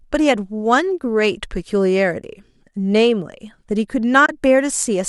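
AAC frame loss with muting occurs from 4.26 to 4.29 s: a 30 ms stretch of the speech drops out, which fits three lost frames of the likely low-delay AAC coding. The decoder zeroed their spectrum, so overlapping windows fade the sound into a soft gap.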